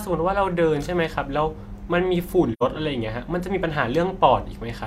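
Speech with an AAC frame loss with muting from 2.53 to 2.62 s. About 85 ms of sound drops out, which fits two lost frames whose spectrum the decoder zeroed. The overlapping windows taper the edges, so the spectrogram shows a soft-edged blank band and the waveform fades to silence and back.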